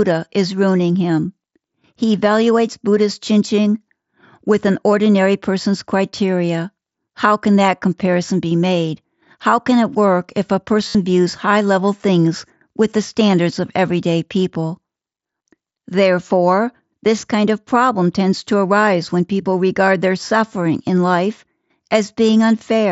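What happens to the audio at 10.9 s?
Concealed Bluetooth headset packet loss, 10.89 to 10.95 s: lost packets are patched by looping roughly the last 20 ms, so the waveform shows identical repeated cycles heard as a buzzy tone, warbling into "views high level things".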